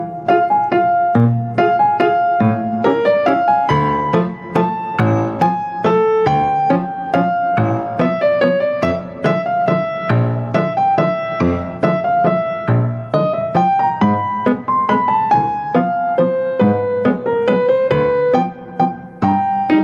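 Throughout, the gain swings by around 15 dB as loud sounds pull it down. This is gain pumping, likely from excessive gain driving a fast limiter.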